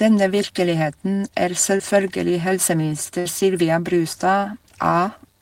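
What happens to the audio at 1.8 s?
At 1.77 to 1.81 s there is short concealed packet loss: about 20 ms of speech never arrived in time, and the decoder filled the gap by extending the preceding sound. It is heard as a brief smear or wobble.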